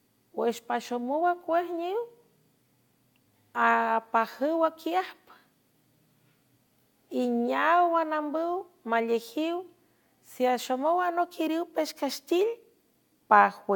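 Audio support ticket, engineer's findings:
No faults found in recording.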